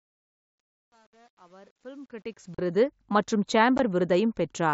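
The gain stage producing the opening fade-in keeps too few bits and applies no dither, which fits roughly a 9-bit path, so truncation distortion on the fade runs from 0.00 to 2.84 s. The fade rises smoothly in level, but at its quiet start the speech collapses into a few coarse square steps. From 0.00 to about 2.3 s, where the signal sits nearest the smallest step, it sounds gritty.

Unconcealed Bluetooth headset packet loss on the wideband mSBC link drops short blocks of speech that are never filled in. Between 0.46 and 0.60 s, about 105 ms of audio is lost in scattered gaps, the longest about 52.5 ms, so this stretch sounds chopped and crackly. About 37.5 ms of speech lost at 2.55 s and a brief 15 ms dropout at 3.78 s each cut the speech abruptly.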